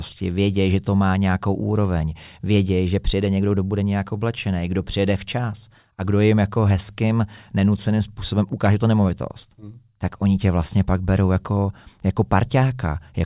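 No technical faults are audible.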